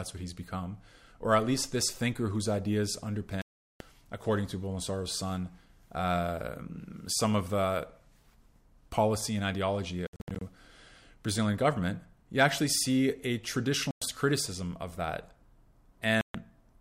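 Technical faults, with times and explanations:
3.42–3.80 s, 10.07–10.42 s, 13.91–14.02 s, 16.21–16.35 s, Bluetooth dropout: the speech cuts to silence and resumes as if it had played on, likely from wireless packets arriving too late. The 10.07 s one is choppy, with several gaps up to about 67 ms.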